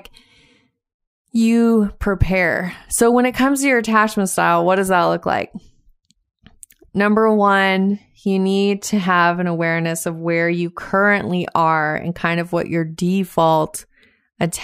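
No technical faults can be heard anywhere in the recording; the speech signal stays continuous and stable throughout, with no disturbance to its level, timing or tonal balance.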